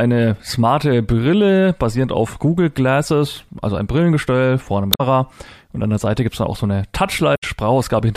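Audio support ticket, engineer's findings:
Damaged data in a compressed stream, twice in the speech: 4.90–5.01 s and 7.34–7.44 s, roughly 0.1 s each. Short blips. Decoder hits corrupt bytes, can't parse those frames, loses sync and hunts for the next header before picking back up.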